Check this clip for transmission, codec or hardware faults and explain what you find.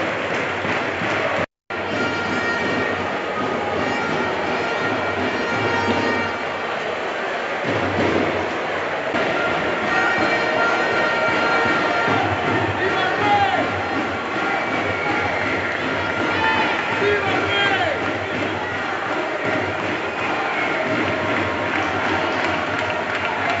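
Nothing turned up here; I listened all the way along and heard no transmission, codec or hardware trouble to point to.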